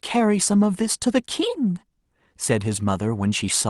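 Nothing stood out on listening to this speech recording, which comes through a WebRTC call path with the Opus codec behaving as it normally does.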